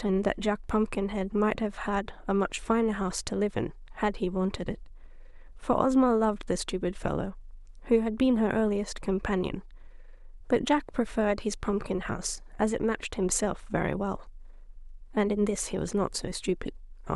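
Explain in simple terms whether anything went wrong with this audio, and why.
Nothing went wrong that I could hear: listening to the whole recording, no part of the speech stood out as broken or out of place.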